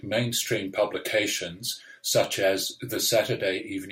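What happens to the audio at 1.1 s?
Nothing goes wrong at 1.1 s: the speech there runs on cleanly, with no dropout, click, distortion or other fault.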